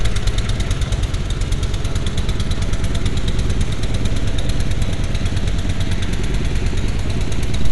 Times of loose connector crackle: none

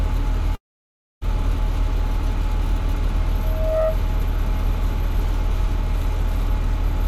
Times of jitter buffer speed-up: none

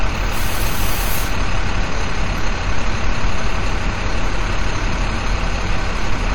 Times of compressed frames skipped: 2.24-2.28

